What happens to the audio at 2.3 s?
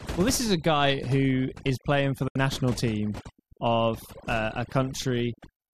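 From 2.28 to 2.36 s there is a digital broadcast dropout. The receiver stopped getting usable frames, so it muted. The speech fades out in about 3 ms and leaves a hole of roughly 72 ms, consistent with about three lost frames, before the speech resumes. Whatever was said in that gap is gone.

Overdone noise removal is also present here, as it is across the whole clip. Bands near the noise estimate are cut hard, so the background drops and breaks up into twinkling specks.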